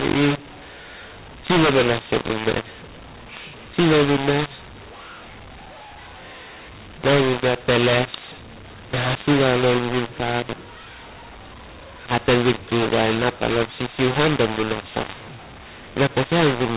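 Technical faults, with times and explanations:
Throughout: mu-law and A-law mixed up. The speech was coded with G.711 mu-law but decoded as A-law, so each 8-bit code maps to the wrong amplitude. Some levels swell, others shrink, and near-silent samples jump well above zero. The result is harsh, gritty speech, while pauses fill with hiss. On a waveform the quiet stretches show a raised noise floor, and a spectrogram shows broadband grain smeared across the 4 kHz telephone band.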